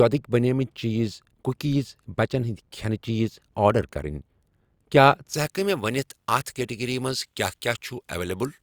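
From 5.34 s, pre-emphasis left on: an unreversed treble boost, about 11 dB at 10 kHz, makes speech hissy and sibilant. The sound turns thin and bright.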